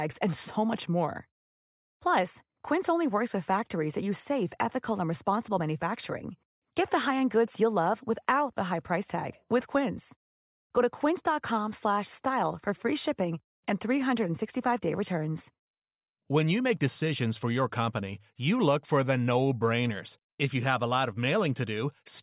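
No technical faults are audible.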